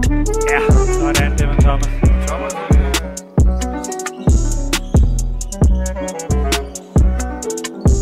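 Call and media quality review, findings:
No audible faults found in this recording.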